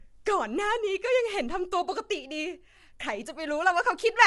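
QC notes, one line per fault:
Throughout, low-delay AAC compression: the speech sounds rough and grainy, with noise filling the gaps between harmonics and nothing above 11.6 kHz. Damage is plainly audible and likely comes from an AAC-ELD encode near 32 kbps, whose short frames resolve pitch harmonics poorly.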